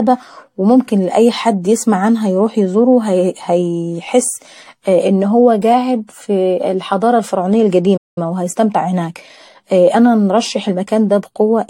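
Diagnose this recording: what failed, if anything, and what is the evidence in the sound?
Codec stage: the speech sounds swirly and hollow, with blurred attacks, and the spectrogram shows patchy holes throughout. This is likely generation loss from several AAC re-encodes.

Playback stage: right after "قاعد في الحضارة الفرعونية", the sound cuts out from 7.97 to 8.18 s, a flat-line gap in the waveform. This is a playback stall, likely buffer underrun.

Playback stage: from 8.18 to 10.12 s the speech is hurried at about 1.1× speed with unchanged pitch. This is time-compressed catch-up, with harmonics keeping their spacing while syllables tighten.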